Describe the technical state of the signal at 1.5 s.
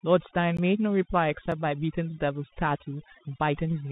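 A tiny tick sits at 1.52 s: the sound drops out for about 3.5 ms and snaps straight back. This is a block of digital silence. A short run of samples was replaced with zeros, likely because the output buffer wasn't filled in time. The signal jumps to zero and back with no fade, and a gap this short merges into a single tick rather than a hole.

The speech around that moment is narrow and muffled, with nothing above 3.8 kHz. A granular hiss runs under it, s sounds are scratchy, and louder high-frequency parts break up. This is the Bluetooth CVSD headset codec. It sends one bit per sample to say whether the waveform should step up or down, and the step size adapts. When the signal moves faster than the step can follow, it distorts, and the result points to a 64 kbps headset link.

The background is also unnaturally hushed, with twinkling specks. That comes from overdone noise removal. A noise reducer set too strong pulls individual frequency bands down or mutes them whenever they come close to its noise estimate. 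Quieter parts of the speech are removed along with the noise, leaving isolated specks in the gaps.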